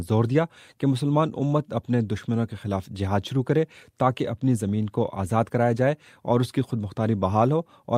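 Nothing stood out as a technical problem on listening to this audio.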